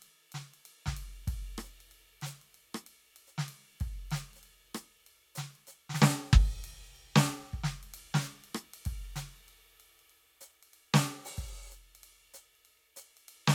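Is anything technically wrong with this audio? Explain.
No, nothing technically wrong can be heard in this music.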